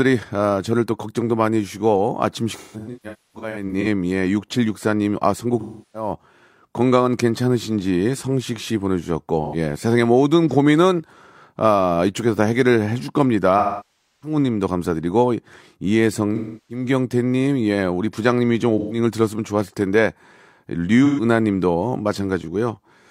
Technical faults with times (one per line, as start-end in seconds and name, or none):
2.55-3.86 AAC frame loss with concealment
5.60-6.12 AAC frame loss with concealment
9.44-9.55 AAC frame loss with concealment
13.58-14.37 AAC frame loss with concealment
16.35-16.84 AAC frame loss with concealment
18.78-18.98 AAC frame loss with concealment
21.05-21.24 AAC frame loss with concealment